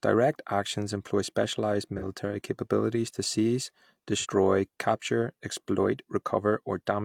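Speech with two brief AAC frame loss with concealment events, at 1.97 to 2.03 s, between "actions employ specialized" and "capabilities to seize", and at 4.19 to 4.26 s, just before "capture exploit". Each gap, about 43 ms, fits one missing frame that the decoder patched from the preceding spectrum, so it sounds smeared and noisy rather than cutting to silence as a plain dropout would, and the sound carries straight through without a fade.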